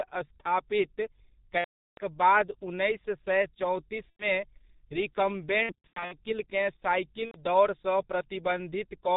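Throughout, the speech passes through the G.723.1 codec at what sounds like its 6.3 kbit/s mode. Nothing above 4 kHz survives and the slowly updated voice model causes heavy damage, leaving the speech muffled and hoarse with smeared consonants.

VoIP packet loss concealed by the speech codec strikes at 1.58–2.03 s, 4.10–4.25 s, in scattered short gaps across 5.63–6.16 s, and at 7.26–7.37 s. The decoder extrapolates its last pitch and filter at falling gain, stretching the sound into a buzzy tone or coloured noise that fades, and the voice stays weak briefly after each gap.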